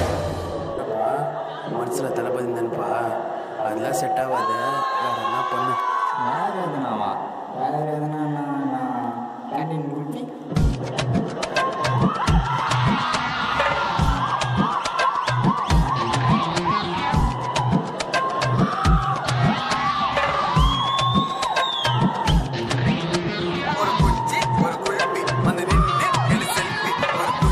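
No technical faults can be heard anywhere in the audio.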